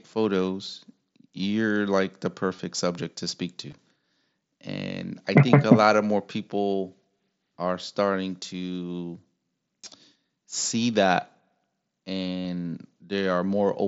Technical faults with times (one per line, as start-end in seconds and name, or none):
2.57 concealed Bluetooth headset packet loss
3.71 concealed Bluetooth headset packet loss
7.19 concealed Bluetooth headset packet loss
9.84 concealed Bluetooth headset packet loss
12.39-12.45 concealed Bluetooth headset packet loss